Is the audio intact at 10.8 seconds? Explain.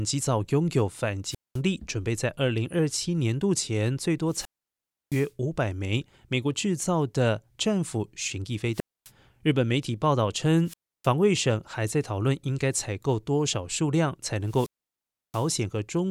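No, a wireless microphone squelch dropout runs from 10.64 to 11.10 s. The fading radio signal brings a rise of hiss before the receiver's squelch mutes the speech for 0.31 s, unlike a clean digital dropout.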